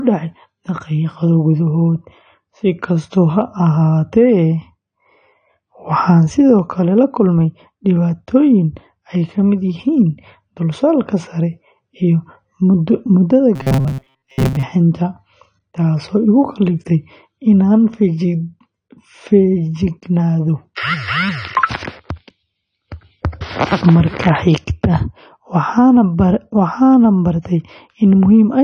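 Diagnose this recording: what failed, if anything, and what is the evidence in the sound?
The codec stage shows damage across the whole recording: the speech is dull and smeared, with a fizzy, warbling texture on sibilants. This is likely AAC compression at a low bitrate, around 32 kbps. Its spread-out smearing sets it apart from a clean low-pass filter.

From 13.56 to 14.63 s, the speech becomes a rigid metallic buzz at 133 Hz. This is robotic sound from repeated short buffers, likely at the driver or buffer stage, with a repeat length of about 7.5 ms. Most of that stretch is repeated audio. The fixed pitch tells it apart from dropouts, which leave silence, or jitter, which gives irregular clicks.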